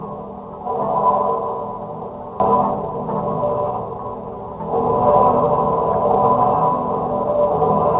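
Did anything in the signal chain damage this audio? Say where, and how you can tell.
Yes. Skip ahead at 2.4 s, in the network and jitter-buffer stage. The sound jumps forward with no gap and no fill. The material on either side is butted straight together, and roughly a second of audio never plays. This happens when a stretch is lost in transit or discarded by an overflowing jitter buffer while later audio is already queued. Playback then resumes from the newer data, and the delay drops by about a second in one step.

Jitter buffer speed-up from 2.76 s to 4.23 s, in the receiver's buffer management. Through this stretch the audio runs at about 110% speed with its pitch unchanged, so events come hurried and closer together. The buffer was holding more than its target, likely after delayed packets arrived in a burst. To drain it, the receiver cut out short pitch-period-sized pieces many times in a row, removing somewhere around 150 ms in total. 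The call path's band limit, with nothing above 4 kHz, fits a G.711 mu-law codec.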